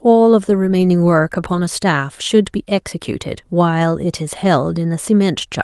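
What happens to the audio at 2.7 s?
Nothing goes wrong at 2.7 s; the speech carries straight through that moment with no dropout, click, distortion or other fault.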